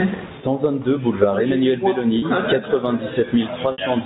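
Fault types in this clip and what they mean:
Gain pumping: loud and soft parts end up closer in level and the sound is squashed, with a swing of around 15 dB. The likely cause is microphone gain set far too high, with a fast limiter clamping it. The waveform shows flattened peaks.
Packet loss with pitch repetition: lost audio was bridged by repeating the last pitch period. At 2.19 s, a 30 ms gap, which fits one lost packet, gives a brief buzzy hold. At 3.72 s, a 60 ms gap fades toward silence before the speech cross-fades back. The spectrogram shows frozen, evenly spaced harmonics.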